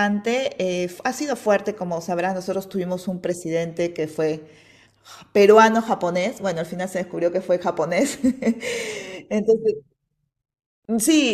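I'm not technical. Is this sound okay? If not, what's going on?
No. At about 10.85 seconds the speech drops out for roughly 31 milliseconds, then carries on exactly where it stopped. This is a gap at a join of encoded pieces: two separately compressed sections were stitched together, and the short stretch of silence each one carries at its edge was never trimmed away.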